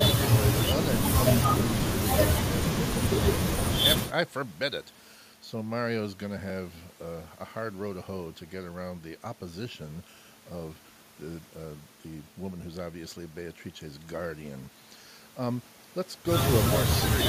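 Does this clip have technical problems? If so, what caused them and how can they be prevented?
No, this clip has no technical problems.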